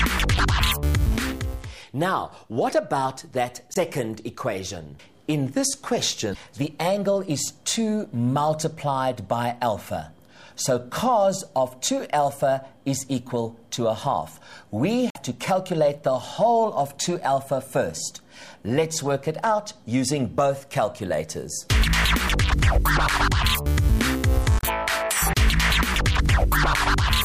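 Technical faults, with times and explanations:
0.36–0.40, 3.73–3.77, 6.31–6.36, 15.09–15.16 and 24.58–24.65 s: damaged data in a compressed stream. Brief blips of 44 to 76 ms occur as the decoder misreads corrupted frames, loses sync and hunts for the next valid header.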